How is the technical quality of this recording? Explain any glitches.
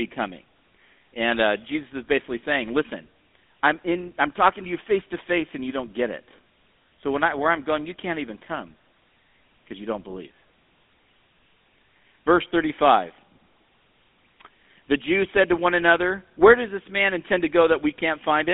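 Poor, with a single fault lasting the whole recording. Throughout, the speech sounds buzzy and gravelly, squeezed into roughly 250 Hz to 3.6 kHz with nothing above 3.8 kHz: the GSM full-rate codec, which fits a 13 kbps phone channel, rebuilding the voice from coarse, regularly spaced pulses.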